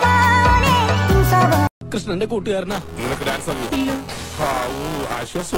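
From 2.71 s to the end, a robotic buzz at about 345 Hz rides on the sound, a steady rattle that stays present whenever there is signal. This is buffer tearing. The writing program and the playback hardware have slipped relative to each other, so in every period roughly a fifth of the buffer still holds audio from about ten milliseconds earlier, hard-joined on both sides. The buzz rate fits a 128-sample buffer.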